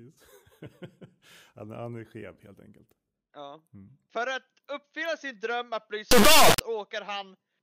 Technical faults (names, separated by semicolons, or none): integer read as float